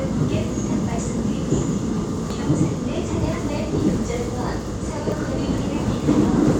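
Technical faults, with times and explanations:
1.62 s, 2.30 s, 3.33 s and 5.12 s, dropped buffer (overrun): at each point the sound jumps ahead with no silence, skipping about 300 ms, then about 100 ms, about 100 ms and about 150 ms. The likely cause is the capture side failing to read buffers before they were overwritten.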